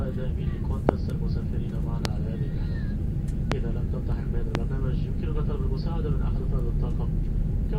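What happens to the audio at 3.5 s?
A single loud pop, from 3.52 to 3.54 s, far above the surrounding sound, likely a voltage pulse from a plug or switch; unlike a dropout, the sound continues underneath.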